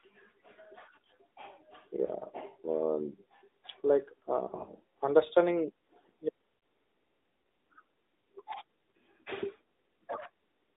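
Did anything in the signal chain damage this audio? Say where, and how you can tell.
Yes. At the codec stage, the AMR narrowband mobile codec confines the spectrogram to about 250 Hz–3.7 kHz throughout, with buzzy, synthetic speech that fits a roughly 10.2 kbps mode.

Lost AMR speech frames over the radio network cause brief warbles at 2.06–2.10, 4.48–4.70, 6.58–6.62 and 8.90–8.97 s. The decoder repeats the last pitch with falling gain, so the waveform dips and the spectrogram shows smeared harmonics.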